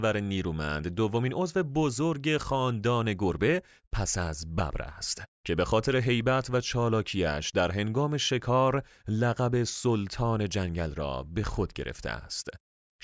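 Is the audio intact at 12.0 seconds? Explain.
No. From 11.5 s to the end, the resampler is restarted on every block: each 100 ms block is converted alone, likely from 44.1 kHz to 16 kHz, leaving an edge error. This gives regular ticks at 10 Hz that, unlike a steady hum, appear only with signal.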